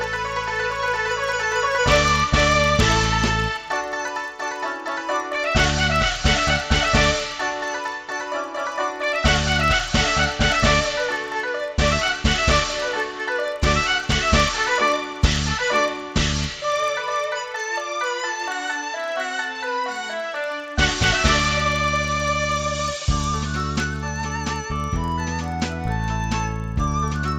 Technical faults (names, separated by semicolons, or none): resampler restarted on every block